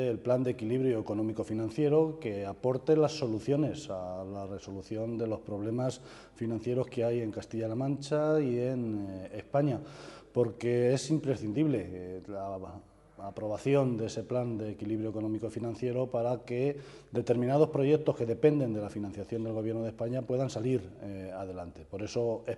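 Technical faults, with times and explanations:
Nothing here jumps out as a technical problem; the audio just rolls along without any hiccups worth flagging.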